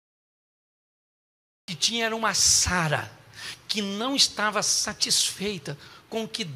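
From 0 to 1.68 s there is digital silence, then a cut-off start: capture began late, so the sound enters mid-event with no attack, unlike a fade-in or pause.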